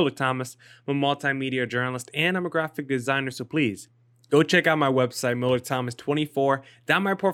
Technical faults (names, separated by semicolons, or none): none